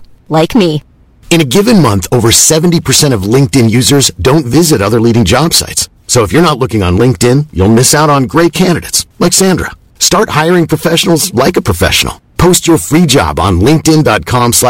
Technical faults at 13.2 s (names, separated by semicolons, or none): hard clipping